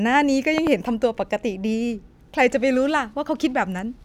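A sudden voltage step, likely from a plug, switch, static discharge or driver glitch, enters the signal path of this speech recording between 0.58 and 0.69 s. The circuits downstream shape that step into a short pulse, so the clip carries a loud pop, in fact two in quick succession, peaking about 15 dB above the speech. The talking continues underneath the sharp double thump.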